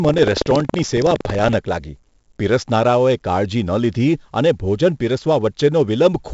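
From 0 to 1.57 s, buffer tearing. Writer and reader collide in a buffer that fits 2048 samples. Small slices of audio about a fifth of a second old cause a 21.5 Hz rattle.

Throughout the speech, 4-bit ADPCM compression. Heavy gritty hiss follows the level, attacks distort, and nothing reaches above 7.7 kHz, consistent with about 64 kbps.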